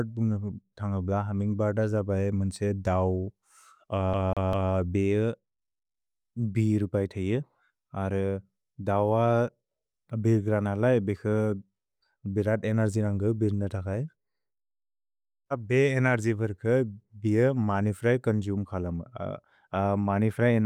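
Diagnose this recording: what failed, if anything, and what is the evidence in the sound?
The failure is at the playback stage, a CD stuck on one turn. From 4.13 to 4.73 s the same 0.2 s slice of speech plays three times in a row, with a brief dropout at each jump, giving that quick, perfectly even stutter. A scratch keeps knocking the laser back one track at the same point on the disc, so every revolution replays the same spot until the player breaks free.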